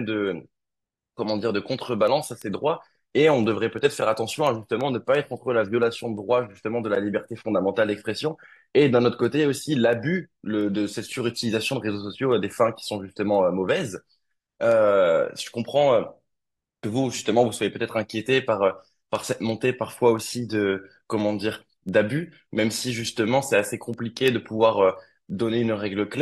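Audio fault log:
0.37–25.99 s, word clock ticks: about seventy single-sample ticks spaced steadily, roughly a third of a second apart. An unlocked receiving clock, off by roughly 70 ppm, slips past the sender's, and each slip drops or repeats one sample. The ticks keep a regular rhythm and leave no silent gaps, which sets them apart from buffer dropouts.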